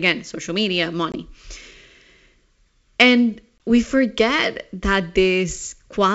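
Packet loss on an ADPCM call hits at 1.12 to 1.17 s and again at 3.59 s. Each time about one packet, some 20 ms, drops out into a hard-edged silent gap. The decoder's predictor and step size lose track of the sender's. Sound resumes with brief, slight distortion. It settles within tens of milliseconds. The wideband G.722 coding underneath keeps its light upper-band hiss, which fits 64 kbit/s.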